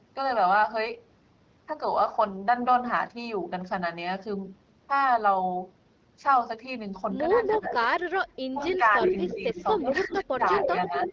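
Speech suppressed in double talk first appears at 7.48 to 7.74 s, where the talker drops by about 10 dB for roughly 200 ms. The likely cause is an echo canceller that was confused by both sides speaking at once and turned the talker down along with the echo.

Echo leak follows at 7.54 to 7.87 s. A faint copy of the voice trails 321 ms behind it at about 15 dB below the speech, likely because loudspeaker sound reached the far microphone and was not fully cancelled.

The echo leak returns at 8.29 s and continues to the end, now much stronger at about 5 dB below the speech. It has the same 321 ms delay, which points to the same likely loudspeaker path.

Speech suppressed in double talk also recurs over that stretch. At 8.54 to 8.99 s, the voice dips by about 15 dB for roughly 150 ms. From 9.34 to 11.11 s, it dips for about 700 ms in total, with the deepest drop around 20 dB. In both cases the likely cause is the canceller attenuating the talker while the other side speaks.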